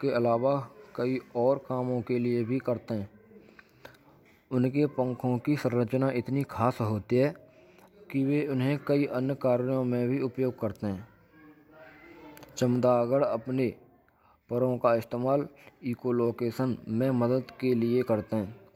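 Nothing here sounds off: no technical faults turn up anywhere in the recording.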